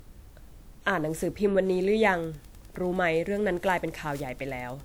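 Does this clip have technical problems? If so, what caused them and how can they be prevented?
Yes. Throughout the speech, the sound is swirly, smeared and hollow, and attacks are blurred. This is likely generation loss. The audio seems to have gone through a lossy codec about five times, consistent with WMA at 96 kbit/s. Each re-encode quantised it again on a shifted frame grid, so the damage stacked up. To prevent it, keep a lossless master and encode only once at the end.

From 1.70 s to the end there is Wi-Fi interference. A steady tick repeats every 102.4 ms, about ten times a second, at roughly 35 dB below the speech. A nearby Wi-Fi radio's beacon was rectified in the audio circuit. To prevent it, keep routers and phones away from the recording gear and use shielded cables.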